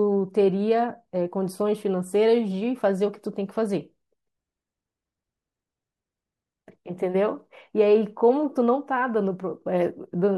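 No technical faults can be heard anywhere in this speech.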